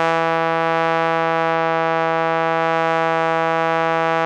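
A short music clip with no technical faults to report. Nothing in the audio points to a problem anywhere in the signal chain.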